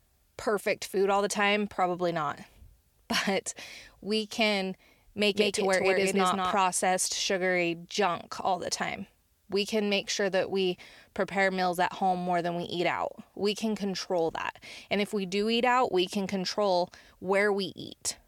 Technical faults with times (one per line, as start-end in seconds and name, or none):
5.34-6.56 doubled audio track